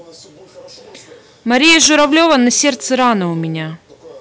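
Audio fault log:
1.53–3.13 s, hard clipping: the speech turns to a harsh, buzzing fuzz on every loud syllable. The signal is driven about 11 dB past what a stage can pass, so its peaks are sliced flat, and those flat tops spray harmonics high into the spectrum.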